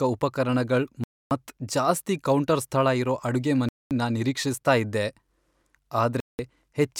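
The speech drops to dead silence three times, at 1.04 to 1.31 s, 3.69 to 3.91 s and 6.20 to 6.39 s, each gap lasting roughly 190 to 270 ms before resuming. These are likely Bluetooth stalls: delayed packets let the receiver's buffer empty, pausing playback until data arrived.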